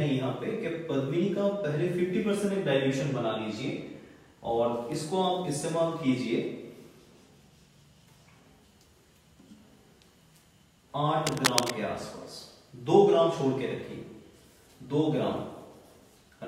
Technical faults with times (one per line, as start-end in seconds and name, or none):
11.26-11.73 cable scratch noise